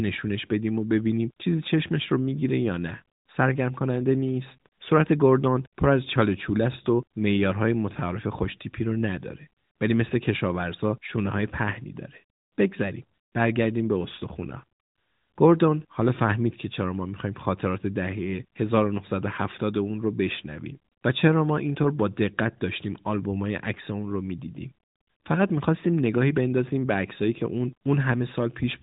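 Nothing technically wrong turns up in this speech clip, which simply carries the narrow, phone-like band of an AMR narrowband mobile call with nothing above about 3.8 kHz.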